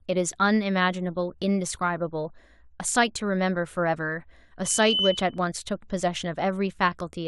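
A speech clip with loudspeaker feedback squeal from 4.64 to 5.40 s: a 3 kHz tone swells over roughly a third of a second to about speech level, as the mic catches its own speaker.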